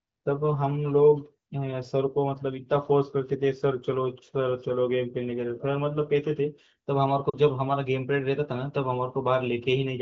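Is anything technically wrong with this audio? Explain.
Yes. From 7.29 to 7.36 s there are lost AMR speech frames. About 40 ms fails its checksum, which fits two 20 ms frames. The AMR-WB decoder, at 15.85 kbit/s, repeats the last good pitch and vocal tract settings with falling gain. The sound drops to near silence within the two frames. The speech then returns weak or rough for a moment.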